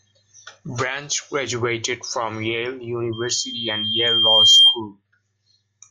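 At 3.12 s a loudspeaker feedback squeal begins in the speech and runs until 4.81 s. The microphone is picking up the loudspeaker it feeds, and at about 3.2 kHz the loop gain passes one, so that frequency keeps reinforcing itself. Unlike a steady interfering tone or hum, it starts from nothing and swells over roughly a second and a half, ending about 15 dB above the speech as a piercing single-pitch howl.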